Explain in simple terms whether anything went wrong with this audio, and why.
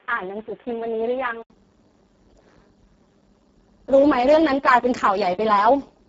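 Two things went wrong. Throughout the clip, the speech was squeezed through the Speex codec, an older voice-chat compressor, at a very low quality setting. With so little data to work with, it rebuilds the voice only roughly, so the speech sounds hoarse, buzzy and somewhat robotic. Nothing above about 7.7 kHz gets through, and the upper part of what remains is mostly a noisy fill rather than real detail.

For the first 1.5 seconds, the recording likely came from a poorer input device before switching to a better one, which can happen when a system swaps microphones or a headset changes modes mid-call. During that opening stretch the sound is dull and boxy, cut off above about 3.7 kHz, a little quieter, and carrying a faint background hiss. At 1.5 s there is a brief gap of about 80 ms, and then the sound opens up and brightens.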